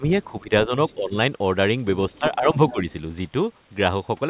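The speech dips repeatedly as speech suppressed in double talk, at 0.00–0.04, 0.31–0.50, 0.67–0.71 and 0.94–1.14 s. The drops reach about 15, 15, 5 and 10 dB, and again about 10 dB across 2.18–2.86 s. An echo canceller likely pulled down the near talker while both sides spoke. On the waveform these show as sudden envelope sags, and the spectrogram shows thinning energy in those spans.

The other side's voice leaking through appears as faint, scrappy fragments at 0.89–0.94 and 2.11–2.20 s, about 35 dB under the speech. A stronger one at 2.69–2.73 s sits about 15 dB under. This is likely residual loudspeaker echo, seen as short, weak harmonic traces overlapping the talker.

All of it sits in a band ending at 4 kHz, which fits a G.711 mu-law call path at 64 kbps.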